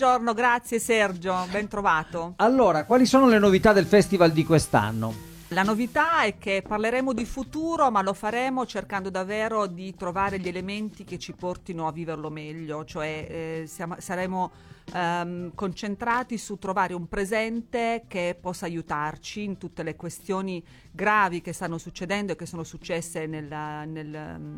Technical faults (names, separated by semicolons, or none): digital radio blending to analogue; loose connector crackle